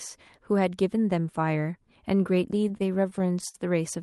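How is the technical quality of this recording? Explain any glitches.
The recording has one real problem: repeated stalls (stutter) between 2.61 and 3.56 s. Over that stretch the sound catches seven times. Packets arrived late, so the jitter buffer kept running dry, and the receiver stretched the last bit of sound to fill each wait. The fills add up to about 135 ms, and the longest is 58 ms. Nothing is actually lost, but the speech drags and hiccups there. It's all coming through a call path whose top end stops around 12 kHz, which fits Opus at a modest bitrate.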